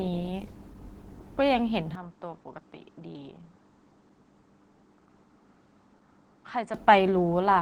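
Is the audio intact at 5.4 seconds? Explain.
No, not quite. Two things are going on at 5.4 seconds.

First, the whole clip carries Opus voice compression, and it's plainly audible here. At a low rate, which sounds like about 16 kbps, the encoder runs in hybrid mode: the SILK linear-prediction coder handles the lower band and a CELT layer covers the top, reaching up to about 20 kHz. With so few bits, the excitation gets coded coarsely. That gives the speech a hoarse, faintly robotic grain over the entire recording.

Second, 5.4 s falls inside a stretch from 1.95 to 6.74 s where it sounds like the input switched to a poorer device, likely another mic or a headset profile. The switch has no gap. The top end suddenly stops around 8.8 kHz, so the sound turns duller, the level drops by roughly 5 dB, and a new noise floor comes in well below the speech, somewhere around 45 dB down.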